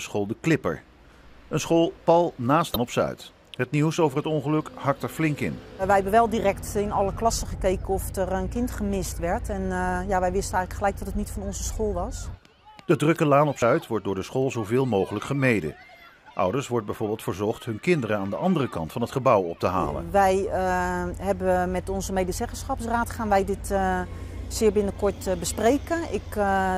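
Two brief bursts of damaged data in a compressed stream are heard, one at 2.74 to 2.76 s and one at 13.61 s, where corrupted bytes make the decoder misread frames and hunt for the next header.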